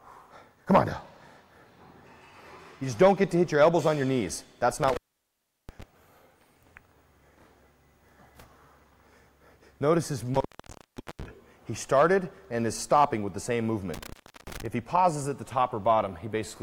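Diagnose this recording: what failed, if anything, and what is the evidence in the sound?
The failure is in the analogue wiring: an intermittent contact, a loose cable or plug briefly opening the signal path. The sound cuts out three times, across 4.83–5.83 s, 10.34–11.25 s and 13.94–14.66 s, with the line open for about 0.72 s, 0.74 s and 0.35 s, and crackle marks the edges as the contact scrapes. Unlike a digital dropout, which falls to clean silence, each gap keeps a faint analogue hiss.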